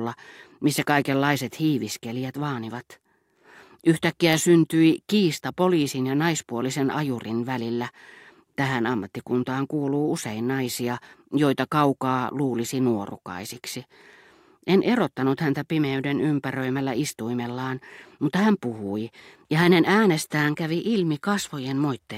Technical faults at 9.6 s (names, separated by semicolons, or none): none